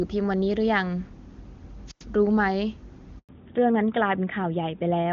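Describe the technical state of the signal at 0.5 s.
At 0.5 s the speech is intact, carried over AMR wideband (HD Voice) at 23.85 kbit/s with no fault present at that moment.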